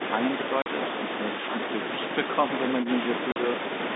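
Packet loss filled with silence hits this speech recording twice, with the receiver inserting silence for the missing audio at 0.62–0.66 s and 3.32–3.36 s. Each 40 ms hole, consistent with two 20 ms packets, cuts the speech off abruptly with hard edges, heard through narrow telephone-band G.711 coding.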